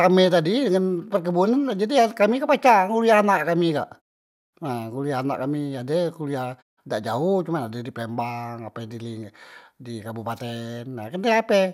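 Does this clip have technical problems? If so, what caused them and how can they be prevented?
No, the speech signal shows no technical faults, so nothing needs preventing.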